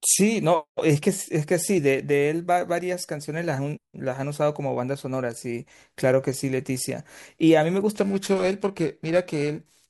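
From 7.95 s to the end, periodic clock jitter kicks in: the converter clock wobbles at around 2 kHz, giving the speech a rough, metallic edge.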